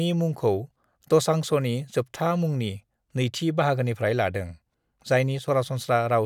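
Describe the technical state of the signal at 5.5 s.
Right around there you're just past a sudden gain jump running from 5.39 to 5.48 s, where the speech and its background noise drop together by about 6 dB in a single step. That's likely a digital gain change applied instantly rather than ramped in.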